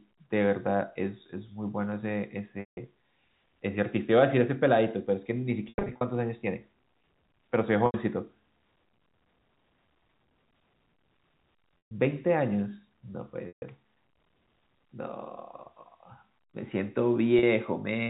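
Speech with packet loss with pitch repetition at 2.6, 5.69 (scattered over 320 ms), 7.86, 11.86, 13.48 and 17.39 s. Each 40 to 210 ms gap is bridged by a repeated pitch period that holds buzzily and fades, unlike plain dropouts, which cut straight to silence.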